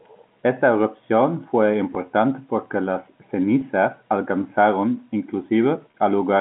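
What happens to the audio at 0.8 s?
At 0.8 s the speech comes through intact, with nothing going wrong beyond the narrow, telephone-band sound of its G.711 coding.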